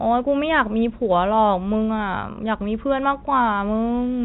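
No technical faults occur in the speech, which carries the narrow band of G.711 telephone coding, with nothing above 4 kHz.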